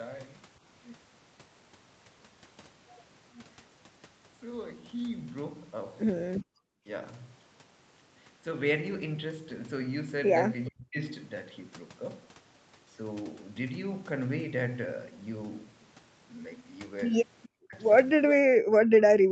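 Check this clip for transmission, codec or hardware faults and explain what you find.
The clip has two fault types, both from echo cancellation on a speakerphone call.

Speech suppressed in double talk occurs at 6.5–6.56 s, 6.8–6.88 s, 10.68–10.99 s, 17.52–17.75 s and from 18.35 s to the end. The speech drops by roughly 35 to 40 dB. This is likely an echo canceller damping everything while both sides talked.

An echo leak appears at 10.65–10.69 s and 17.43–17.49 s. Faint scraps of voice return 421 ms late, about 25 and 30 dB below the speech. Residual loudspeaker pickup likely slipped past the canceller and was sent back.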